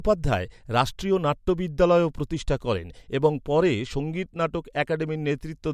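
No audible faults anywhere in the speech recording, so there is nothing to flag.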